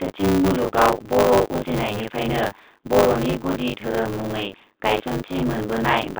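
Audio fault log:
Throughout, buffer tearing: a steady robotic rattle at 100 Hz rides on the sound wherever there is signal and drops away in the pauses. The writing program and the playback hardware have slipped relative to each other, so in each 10 ms period roughly two-fifths of the buffer still holds audio from around 40 ms earlier, with hard joins on both sides. A spectrogram shows vertical striations every 10 ms, and the waveform shows abrupt steps at the joins.
1.88 s, packet loss with pitch repetition: a gap of 10 ms, which points to a single lost packet, was bridged by repeating the last pitch period, and this is heard as a brief, slightly held, buzzy moment. On a spectrogram the harmonics go flat and uniform for that instant, and the waveform shows identical cycles repeating with a slight fade before the normal signal resumes. The telephone band, roughly 250 Hz to 3.7 kHz, is visible as a hard ceiling on the spectrogram throughout.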